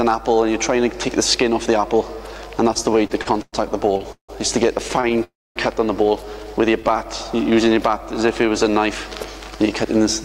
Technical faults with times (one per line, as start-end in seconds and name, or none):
2.73-4.30 repeated stalls (stutter)
4.88-5.20 repeated stalls (stutter)
5.24-5.58 call audio freeze
6.80-8.80 jitter buffer slow-down